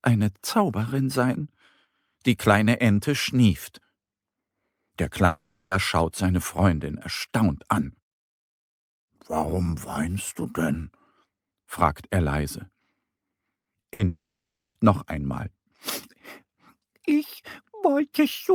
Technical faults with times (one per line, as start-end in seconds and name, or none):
5.25-5.73 long network dropout
13.61-14.01 repeated packet loss (robotic sound)
14.07-14.77 long network dropout